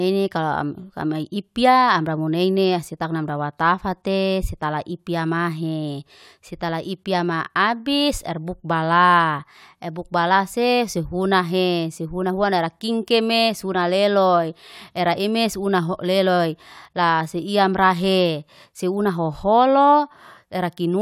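A speech recording with nothing technically wrong with it.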